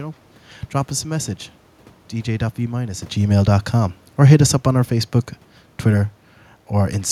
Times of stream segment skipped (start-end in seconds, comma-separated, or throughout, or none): none